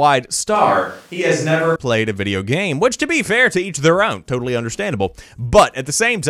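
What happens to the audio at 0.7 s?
At 0.7 s the voice turns roomy and hollow, with thinner bass. The change starts suddenly at 0.55 s and snaps back at 1.76 s. The level stays about the same. This is likely a switch to a distant microphone, picking up more room sound.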